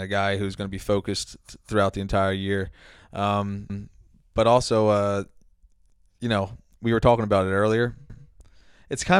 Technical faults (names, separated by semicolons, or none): overlapping chunks